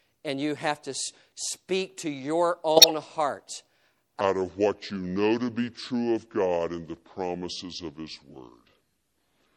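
MP3 compression runs through the whole speech recording, and it is likely the cause of a plainly audible coarseness. The encoder seems to have had too few bits, which fits a rate around 64 kbps. It trimmed the treble at a fixed ceiling and dropped quieter frequency lines, and those lines flicker in and out between frames. As a result the voice takes on a watery, swirling texture, sibilants chirp metallically, and consonant onsets sound smeared.

A corrupt frame decoded from 2.76 to 2.91 s breaks in as a short burst of chirping, squeaky noise. Bit errors damaged a run of several consecutive compressed frames, and the decoder played them anyway. Misread gains and codes placed energy at frequencies where none belonged. The garbled sound lasts only as long as those damaged frames, about a seventh of a second, and then the signal recovers.

A section at the wrong speed begins at 4.21 s and continues to the end. 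From that point the audio plays at 0.693 times its original rate, likely because the player or an edit assigned the wrong clock to that stretch. Speed and pitch drop together at the boundary, so the voice suddenly becomes slow and drawn out and sits roughly seven semitones lower, noticeably deeper and heavier than before.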